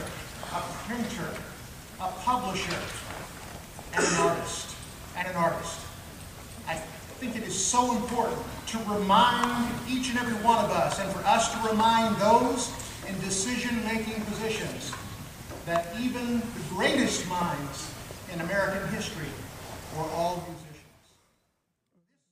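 There are no technical faults to describe in this clip.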